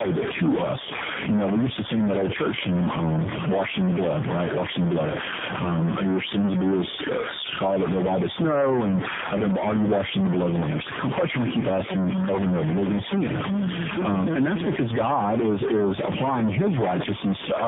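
From start to finish there's a distortion riding on the speech, and the pauses never go quiet; they fill with a steady noise floor. That points to a stuck bit, likely one data bit pinned at 0 or 1 by a broken line or converter, throwing roughly half the samples off in a waveform-dependent pattern.

Also throughout is tandem speech coding: the speech sounds rough, muffled and warbly, with nothing above 3.7 kHz. The sound fits a chain of three speech codecs in a row, something like GSM full rate into AMR-NB at 7.95 kbit/s twice, with G.711 mu-law links between, each re-encoding the previous codec's damage.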